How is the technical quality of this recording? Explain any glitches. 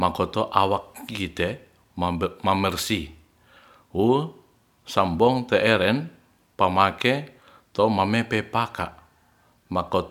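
The recording has no audible technical faults at any point in the speech.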